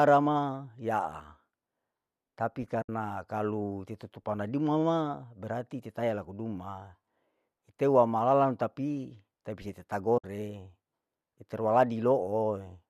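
At 2.82 to 2.89 s and again at 10.18 to 10.24 s, the speech drops into two short holes of about 70 ms and 60 ms. This is AAC frame loss with muting. The decoder zeroed the missing frames, and overlapping windows fade the sound out and back in. The lengths fit several short frames from the light, likely low-delay AAC coding.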